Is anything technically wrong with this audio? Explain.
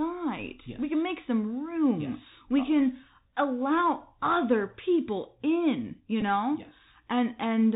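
Yes, there are two problems. The whole clip goes through the Bluetooth CVSD headset codec, and there's one brief glitch from a repeated headset packet near the end.

The CVSD codec damage is plainly audible throughout and fits a 64 kbps link. This is narrowband: one bit per sample nudges the level up or down with an adaptive step, so nothing above 4 kHz survives. The s sounds come out scratchy, loud high content distorts, and grainy hiss sits under the speech.

The Bluetooth headset packet repeat comes right after "other people in you", at about 6.21 to 6.23 s. Roughly 11.2 ms went missing, which points to about three lost packets. The chip replayed the previous packet's bits each time, so you hear a short buzz near 267 Hz before clean audio resumes.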